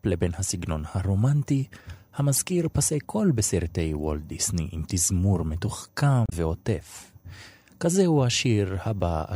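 A speech clip with two short bursts of damaged data in a compressed stream. The first runs from 2.35 to 2.38 s, about 36 ms. The second runs from 6.26 to 6.33 s, about 68 ms. Each is heard as a brief, unnatural glitch. Corrupted bytes in the encoded file make the decoder misread those frames. It loses sync and searches for the next valid frame header.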